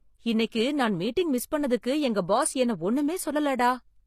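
Throughout the speech, nothing sits above 15 kHz. The spectrogram shows a flat ceiling there, with smeared, patchy texture below it. This is likely low-bitrate audio saved at a high bitrate: the sound fits a heavily compressed first encoding, such as 24 kbit/s HE-AAC, whose losses the later MP3 pass cannot restore.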